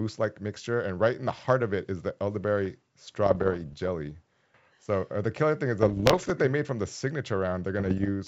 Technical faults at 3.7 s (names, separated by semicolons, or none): bit errors on an ADPCM link